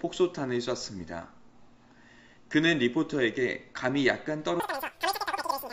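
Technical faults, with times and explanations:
4.60 to 5.73 s, wrong sample rate: the last stretch of audio suddenly races ahead, about 2.76 times faster and roughly 17.6 semitones higher, which fits material captured at 16 kHz being played out at 44.1 kHz with no conversion. Because the samples are simply clocked out faster, duration shrinks and every frequency rises by the same ratio. On a spectrogram the harmonics jump upward and events compress horizontally; the waveform envelope looks squeezed in time.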